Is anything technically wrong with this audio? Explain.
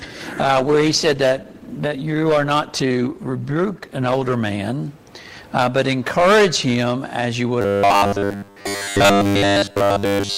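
Yes, there are two faults.

From 0.38 s to 4.45 s there is a call bitrate drop. The connection's bandwidth estimate collapsed, and the encoder was pushed from 96 kbps down to 15 kbps, staying at that floor for nearly 4 seconds. With so few bits, Opus quantises everything more coarsely and discards the upper frequency range. The audio goes muffled and rough, with a watery, smeared texture, and stays that way until the rate climbs back.

From 7.62 s to the end of the clip there is robotic sound from repeated short buffers. The likely cause is fresh audio arriving too infrequently, so the playback side keeps looping the most recent fragment instead of playing new material. Here essentially all of that stretch is repetition, and the loop imposes a fixed 100 Hz buzz, which fits a 10 ms fragment being replayed. The sound becomes a stiff, metallic drone that only loosely tracks the original.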